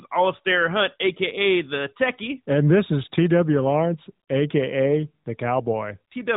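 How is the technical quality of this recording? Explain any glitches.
Nothing stood out as a glitch or technical problem on listening to this speech recording.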